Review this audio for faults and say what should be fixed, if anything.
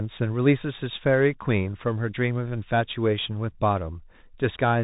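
The whole clip runs through a Bluetooth CVSD headset codec: nothing passes above about 3.8 kHz, and the one-bit up/down encoding, which fits a 64 kbps stream, can't keep up on loud highs, so sibilants go scratchy over a grainy hiss. Record on the headset's wideband mode or a wired mic instead.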